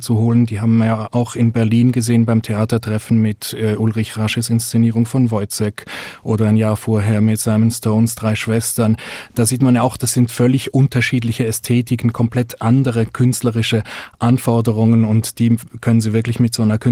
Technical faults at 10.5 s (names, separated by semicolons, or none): none